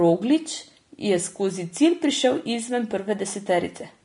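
A speech recording that has likely been through low-bitrate Vorbis compression, the damage plainly audible from start to finish and consistent with a rate somewhere near 34 kbps. The encoder has discarded everything above 10.6 kHz, so the top end stops dead, and the treble that remains is quantised so coarsely that fine detail turns into hiss of similar energy. Sibilants come out grainy, tonal parts sound roughened, and consonant onsets are smeared rather than crisp.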